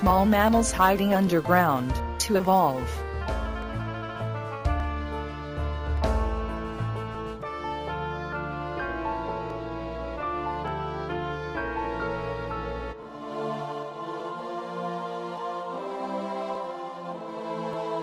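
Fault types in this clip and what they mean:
Clock drift buffer slips: regular clicks every 1.18 s from 0.1 to 17.7 s, likely from mismatched device clocks forcing a few dozen samples to be dropped or repeated.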